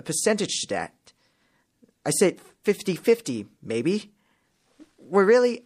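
Throughout the speech the treble is dull and cut off, with a watery, swirling quality and chirpy, smeared s sounds. The likely cause is MP3 compression at a low bitrate, which fits roughly 64 kbps, where the encoder drops high frequencies and lets weak spectral detail flicker between frames.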